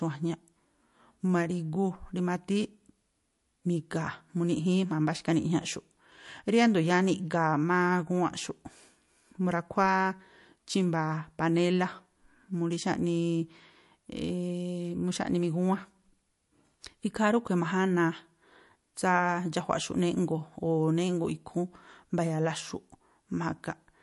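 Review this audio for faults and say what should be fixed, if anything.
The speech has a watery, swirly texture from start to finish, with metallic chirping on s sounds, smeared consonant attacks, and nothing above 11.3 kHz. This is likely MP3 compression. The encoder ran short of bits, so it cut the treble at a fixed point and dropped weaker frequency lines that flicker in and out between frames. The damage is plainly audible and fits a low bitrate of around 48 kbps. To prevent it, record and deliver in a lossless format, or encode MP3 at 128 kbps or higher.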